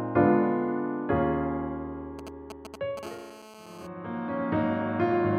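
A galloping dit-dit-dit of short raspy buzzes cuts into the audio from 2.19 to 2.99 s, standing only around 10 dB below the wanted sound. These are GSM signalling bursts. A 2G phone close by sends brief clusters of radio bursts while it negotiates with the network, as happens before a call or text comes through. The audio circuitry rectifies those pulses, so each cluster turns into a brief buzz at the 217 Hz burst rate. Right after, from 3.03 to 3.87 s, the pattern settles into a continuous, hard, harmonic-rich buzz at 217 Hz, about 18 dB below the signal and unrelated to it. This is GSM phone buzz. A nearby handset is in an active call and now transmits 217 bursts every second without a break. The circuit demodulates that steady pulse train into a constant rasp whose many harmonics give it its harsh, buzzy edge.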